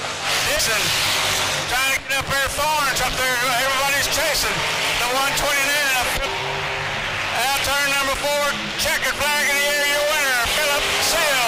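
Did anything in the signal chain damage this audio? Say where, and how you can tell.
Yes. The compressed stream itself was damaged, with corrupted bytes in the encoded data at the codec or storage stage. The decoder hits frames it cannot parse, loses sync and has to hunt for the next valid frame header. That damaged data in a compressed stream produces brief disturbances at 3.06 s and 7.57 s, and a longer one from 10.54 to 10.58 s. Each disturbance is a short burst where the decoder briefly misreads the audio.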